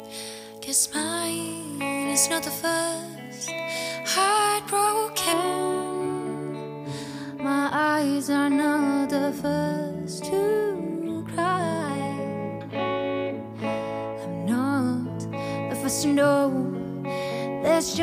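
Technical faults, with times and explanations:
0.00–5.33 s, pre-emphasis left on: the opening stretch sounds thin, glassy and overbright, with hissy, spitting top end and little body underneath. A treble lift matching the J.17 curve was applied before recording or transmission, but the complementary de-emphasis was never applied on playback, so highs stay raised by about 11 dB at 10 kHz relative to 1 kHz. The balance tips upward until the tone settles after 5.33 s.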